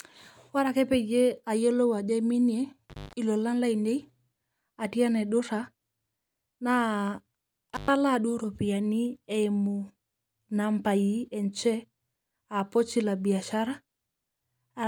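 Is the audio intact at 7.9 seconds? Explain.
No, not quite. 7.9 s is the tail end of an intermittent contact that runs from about 7.74 to 7.90 s, right before "duo ropiyiani eimu". It sounds like a loose plug or cable briefly losing its connection: the speech drops out for roughly 114 ms, leaving just faint hiss, with a crackle as the contact breaks and another as it snaps back. So 7.9 s is where the signal returns, not clean audio.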